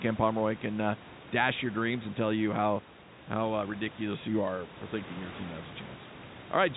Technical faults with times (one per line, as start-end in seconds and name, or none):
none